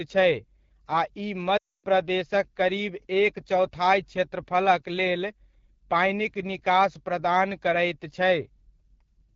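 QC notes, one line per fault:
throughout: AMR wideband (HD Voice) codec at 8.85 kbit/s, one of its lowest rates; the sparse pulse-driven vocal tract model leaves speech plainly rough and raspy.
1.57 to 1.85 s: lost AMR speech frames, a gap of about 260 ms, which fits a run of thirteen 20 ms frames. The decoder stretched the last good frame and faded it quickly to silence, so speech comes back weak or rough.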